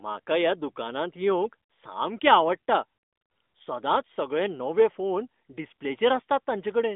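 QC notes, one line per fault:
No faults found; the speech carries the narrowband mobile-line character expected of the AMR narrowband codec, band-limited to roughly 200 Hz to 3.6 kHz.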